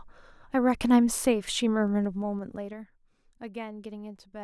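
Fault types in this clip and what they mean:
Zipper noise: a ticking zip from 1.88 to 2.90 s, as the level drops about 15 dB in unsmoothed 2 dB steps, roughly five a second.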